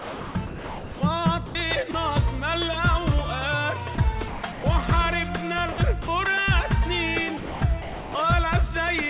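Sound chopped by the voice detector runs through four stretches: 0.00–1.01 s, with about 890 ms replaced; 4.28–4.64 s (270 ms); 5.72–6.08 s (120 ms); and 7.37–8.15 s (570 ms). In each, the sender's voice activity detector likely kept toggling, so quieter parts and onsets were swapped for synthetic comfort noise. The result is choppy. On a waveform these stretches show the envelope repeatedly collapsing to a flat, low, even band. A spectrogram shows detailed structure alternating with smooth, featureless noise patches. Separately, sound dropped by the voice detector appears as three short gaps at 1.46–1.55 s (90 ms), 1.91–1.94 s (30 ms) and 3.95–3.98 s (30 ms). Here the detector likely mistook low-level sound for background, stopped sending, and the receiver filled in steady noise. These show up as brief notches where the waveform drops to a thin constant floor and the spectrogram goes blank-grey before detail resumes. 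Throughout, nothing reaches above 4 kHz, a hard ceiling that fits a G.711 A-law call path at 64 kbps.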